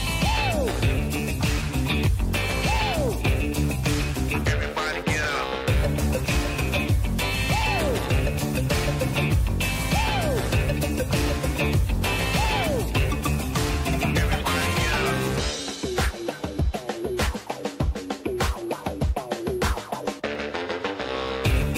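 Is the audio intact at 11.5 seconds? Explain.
No. From 0.77 to 21.29 s, clicks recur every 0.93 s, likely clock drift buffer slips, where unsynchronised clocks force small sample drops or repeats. Their strict regularity distinguishes them from random dropouts.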